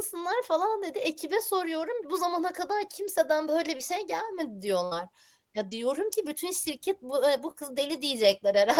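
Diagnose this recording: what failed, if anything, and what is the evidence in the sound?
Short concealed packet loss at the network stage. Brief smears or wobbles occur at 3.77–3.81 s, 5.69–5.73 s and 7.51–7.56 s, each covering about 20 ms of lost speech. The receiver extended the preceding sound across each hole, then blended back into the real audio.

A burst of packet loss, also at the network stage, hits at 4.85–4.93 s. Consecutive packets arrived too late or not at all, removing about 60 ms of speech. The decoder continued the last sound and faded it out, leaving a short decaying buzz or hiss before playback jumps ahead.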